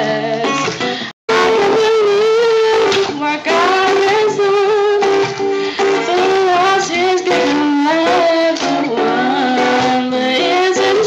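Stream reconnect at 1.11 to 1.30 s: the connection dropped, leaving 168 ms of silence, then a fresh decoder resumed the audio roughly a fifth of a second further on.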